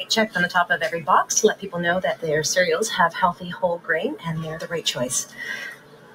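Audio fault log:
throughout: noise suppressor applied to music or sounds. The level pumps and flutters, with held parts and tails sinking while attacks push through. A suppressor tuned for speech treats the steady content as noise, swinging its gain reduction over a range of around 15 dB.
1.55–1.71 s, 4.56–4.71 s, 5.24–5.41 s, 5.71 s to the end: sound cut by the noise suppressor. Each stretch dips, by about 14, 13, 10 and 14 dB respectively. The first three last roughly 0.15 s and the last about 0.4 s, as the suppressor mistakes steady or decaying sound for noise.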